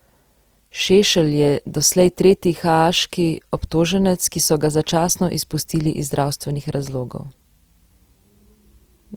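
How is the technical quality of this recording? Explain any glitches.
Technical quality is held back by compression damage that's plainly audible from start to finish. Throughout, the speech sounds rough and grainy, likely from Opus compression in its CELT music mode at about 24 kbps. Starved bands get filled with noise or copied lower bands, so the full bandwidth stays but turns gritty.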